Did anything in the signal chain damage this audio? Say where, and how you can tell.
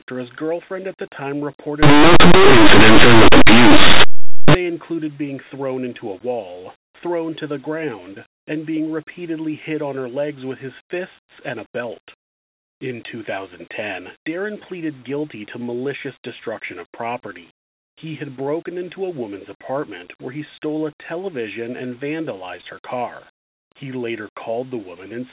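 Yes. From 1.83 to 4.55 s, between "girlfriend at the time" and "included being thrown into", the speech becomes very loud, harsh distortion. This is linear audio read as companded at the sample-format stage: plain linear 8-bit samples were expanded as mu-law codes, so small values just to one side of zero became the loudest outputs.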